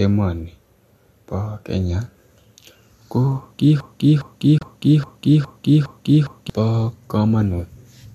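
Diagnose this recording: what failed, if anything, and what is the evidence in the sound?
Broken-record loop, playback stage: from 3.80 to 6.50 s a 410 ms fragment repeats seven times, likely a stalled buffer resending its last block.

Digital broadcast dropout, codec stage: from 4.58 to 4.62 s, an 8 ms fade into a 24 ms silent gap, fitting one corrupt frame muted by the decoder.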